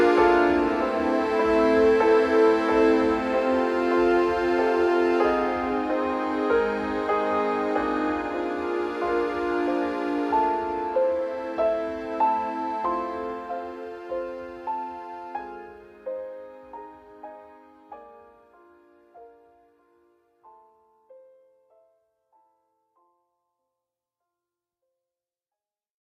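No technical faults can be heard anywhere in it.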